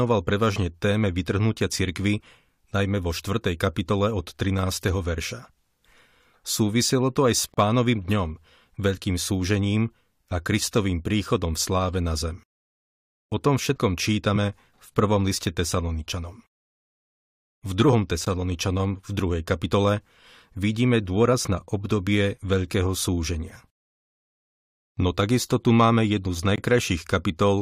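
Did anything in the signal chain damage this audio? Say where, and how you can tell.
Yes. The speech has three blocks of digital silence, a driver or buffer fault: about 35 ms from 7.54 s, a 15 ms hole at 18.25 s, and about 21 ms from 26.56 s. The last one fits a 1024-sample buffer at 48 kHz. Each is heard as a short hole. On the waveform the trace snaps flat with no fade. A spectrogram shows a blank full-band gap. The output buffer wasn't filled in time, so zeros played instead.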